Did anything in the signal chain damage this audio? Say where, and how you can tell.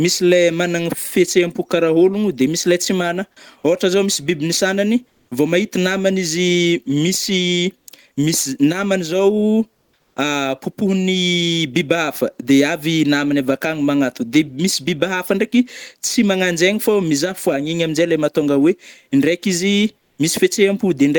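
Yes, at the codec stage: comfort noise in place of the background during four pauses, at 5.08–5.31 s, 7.79–7.87 s, 9.73–10.16 s and 19.99–20.18 s. The real room tone, about 43 to 51 dB below the loudest speech, gives way to a steady, textureless hiss. Its level shifts by about 4 dB down, 1 dB up, 5 dB down and 2 dB up respectively. On a spectrogram each gap shows a smooth, uniform noise band with no fine detail, and the waveform's background envelope steps at the edges. This is likely Opus discontinuous transmission, with the receiver synthesising noise while the sender is idle.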